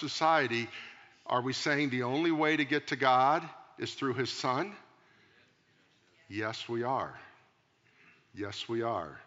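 Nothing stood out on listening to this speech, with only a faint background of room noise sitting about 51 dB below the voice.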